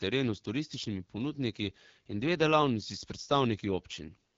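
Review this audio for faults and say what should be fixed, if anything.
The whole speech recording carries plainly audible AMR wideband (HD Voice) codec damage. The voice has the rough, raspy edge of this codec's low-rate modes, which points to a rate around 8.85 kbit/s. The vocal-tract model with pulse excitation is starved of bits, so the speech sounds grainy, and the top band is shaped noise rather than real detail. Nothing is present above 7.5 kHz. That cutoff separates it from narrowband telephone coding, which stops near 3.4 kHz, and the raspy texture rules out a clean low-pass filter. To prevent it, capture or transmit at 12.65 kbit/s or higher, or use a wideband codec with more bitrate headroom.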